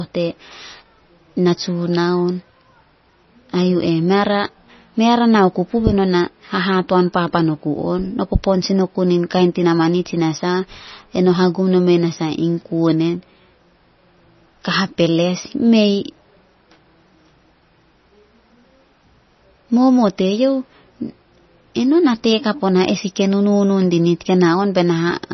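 MP3 compression runs through the whole speech clip, from start to finish. Nothing reaches above about 5.9 kHz, so the treble is gone, and the damage is heavy: a watery, swirling texture, metallic chirps on s sounds, and softened attacks. The likely cause is an encoder starved of bits, which fits a bitrate around 24 kbps. It cuts the top band outright and drops weaker frequency lines that flicker on and off between frames.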